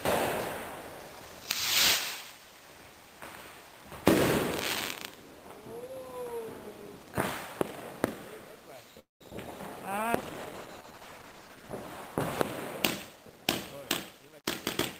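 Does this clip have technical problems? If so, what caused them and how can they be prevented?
Yes, there are four kinds of fault, all in the back half.

Call audio freeze, 8.99 to 9.23 s: the sound trails off and goes silent for about 160 ms, inserting roughly 212 ms of gap. It's likely packets stalled in transit, emptying the jitter buffer. A more stable network path or a slightly deeper jitter buffer would help.

Short concealed packet loss, 9.31 to 9.33 s and 9.37 to 9.39 s: two brief smears where about 20 ms each went missing and got patched over. Reducing loss on the link, or adding FEC, would prevent these.

Call bitrate drop, 9.97 to 12.80 s: the encoder fell from 32 to 13 kbps, sitting at the bottom for about 1.5 s, so it goes coarse and dull. Keeping more bandwidth headroom or smoothing the congestion response would help.

Jitter buffer speed-up, 13.10 to 13.47 s at 126% and 14.11 to 14.40 s at 117%: after the backlog, the receiver clipped out pitch periods, roughly a tenth of a second and then about 50 ms, so it sounds hurried. 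Steadier packet delivery or gentler catch-up settings would prevent it.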